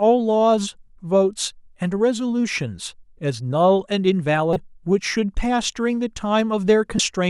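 At 4.53 to 4.56 s and again at 6.96 to 7.00 s, damaged data in a compressed stream makes the decoder lose frame sync, giving brief glitches heard as a chirp, squawk, click or short hole that interrupt the speech.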